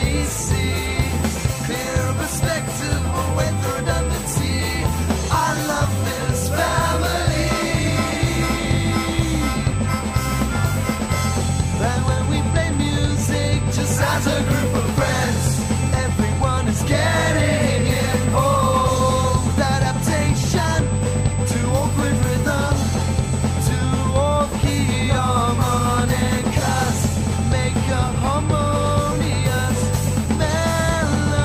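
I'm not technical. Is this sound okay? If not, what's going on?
No, there's a steady high-pitched whine running from start to finish, fairly noticeable under the sound. That's USB whine: the USB connection pulls power in rapid, regular bursts, and that leaks into the audio as a fixed tone at 8 kHz.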